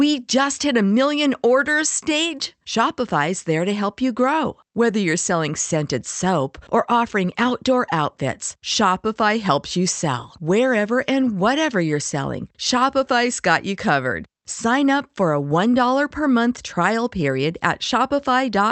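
Nothing here is wrong: it's a speech recording carried over a WebRTC call path with the Opus codec, whose top end stops around 8 kHz as you'd expect from that setup.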